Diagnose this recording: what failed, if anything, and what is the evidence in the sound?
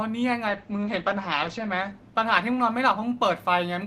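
A call bitrate drop in the codec stage, driven by the network's bandwidth estimate. From 0.49 s to 3.49 s the speech turns coarse and muffled, with the top end cut from about 20 kHz to 8 kHz, which fits the encoder falling from roughly 48 to 12 kbps and sitting at its lowest for about 1.19 s.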